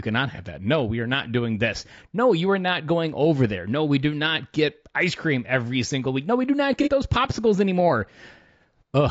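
Throughout the speech, a low-delay AAC compression stage, likely AAC-ELD, spends too few bits on short frames. It leaves the voice rough and grainy, with plainly audible noise between harmonics and a thin, synthetic top band, which fits a bitrate near 32 kbps.

AAC frame loss with concealment follows at 0.35 to 0.40 s and at 6.83 to 6.89 s, between "we do not" and "those popsicles anymore". Each time the decoder rebuilds a missing frame from the previous spectrum, producing a brief smeared, noisy patch that fits one lost frame of about 30 ms.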